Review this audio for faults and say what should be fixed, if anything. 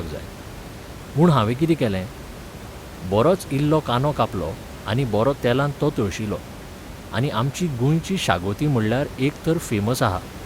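No faults; nothing needs fixing.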